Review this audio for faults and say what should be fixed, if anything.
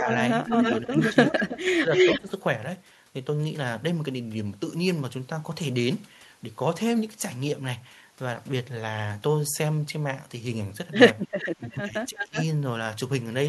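Echo leak appears from 0.07 to 2.19 s, where a copy of the speech returns about 0.32 s late and roughly as loud as the original. Shorter, quieter leaks, roughly 10 dB down and about 0.36 s late, appear at 11.39 to 11.78 s and 12.16 to 12.44 s. The likely cause is a far-end echo canceller leaving loudspeaker pickup in its microphone signal. On a spectrogram the harmonic pattern repeats, shifted right by the delay. On the waveform each burst trails into a second, offset envelope. To prevent it, tune the far-end canceller's adaptation and residual echo suppression, or have that side use a headset.

Speech suppressed in double talk runs from 0.81 to 2.31 s, with dips totalling around 0.7 s and reaching roughly 15 dB, and again from 11.57 to 12.37 s, also around 0.7 s in total and reaching roughly 20 dB. Both overlap the echo bursts, so the likely cause is a canceller that mistook local speech for echo and attenuated everything. 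The waveform shows sudden notches in the envelope. The spectrogram shows energy fading in patches. To prevent it, use a canceller with reliable double-talk detection that holds back suppression when both sides speak.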